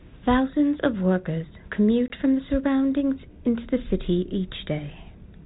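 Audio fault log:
2.08–2.13 s, packet loss on an ADPCM call: about one packet, some 20 ms, is lost and replaced by a hard-edged silent gap in the 32 kbit/s G.726 speech. The decoder's adaptive predictor and step size lose step with the sender's, so speech resumes disturbed before resynchronising by 2.13 s.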